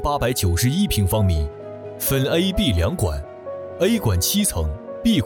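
Nothing technically wrong turns up here, since the audio runs along without any fault that a listener would pick out.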